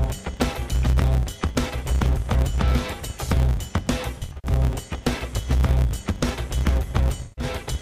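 From start to finish a steady buzz at 100 Hz rides on the sound, which also plays about 1.16 times too fast without a matching rise in pitch. This is a block size mismatch (truncated): one stage writes longer blocks, which fits 512-sample blocks, than the next reads, so each block's tail is discarded.

At 1.51 s a brief smeared, phasey patch of about 43 ms appears. From 4.18 to 4.50 s the audio turns noisy and decays in scattered dropouts, the longest around a tenth of a second. From 7.23 to 7.44 s it fades toward silence and returns. All three come from AAC frame loss with concealment, where the decoder rebuilds missing frames from the last good spectrum.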